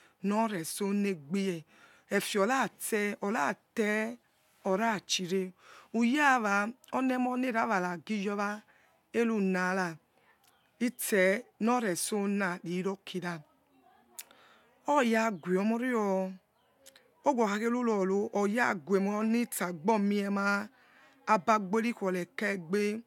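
It's a speech recording, and nothing in it stands out as a technical problem at any point.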